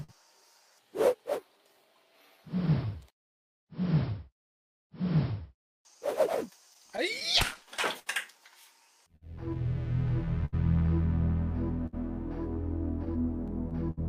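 Clock drift between sender and receiver runs through the whole clip. The sender's clock is slow, by roughly five percent. Less audio arrives than the receiver plays out, so its buffer keeps draining. The receiver has to patch and stretch to keep going. The result is small timing hiccups that recur at uneven intervals from start to end. The unsteadiness is spread across the clip.

The first audible event is a short stall from a late packet, from 0.03 to 0.11 s. A packet was not there when it was due, and the buffer ran dry. The receiver held the last sound for 51 ms until the packet came, then resumed where it left off. Nothing is lost. The opening sound is simply held a little too long, with a faint buzz or dip.

Repeated timing corrections follow from 1.17 to 13.24 s. To cope with the slow sender, the receiver keeps adding short repeated pieces. The edits all run the same way and are unevenly spaced. 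Playback runs at about 99 percent of normal speed across this stretch. Roughly 150 ms is added in total. It comes across as a slightly dragging, unsteady tempo rather than clear glitches.

Scattered short gaps appear from 2.66 to 13.99 s. About twenty packets were lost or late, one here and one there. Each hole was filled by continuing the last sound, so none of the audio itself goes missing. Together the patches come to about half a second, around 5 percent of that span. The longest is near 70 ms. They are heard as brief ticks, smears and small hiccups.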